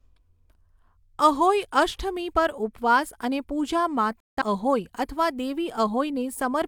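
At about 4.20 s, right after "પર ઉપવાસ અને પૂજા", the speech drops out in a digital broadcast dropout. The receiver lost good frames and muted, with a quick fade of about 8 ms. The programme comes back around 4.42 s at "અહોઈ અથવા", and the gap's audio is simply gone.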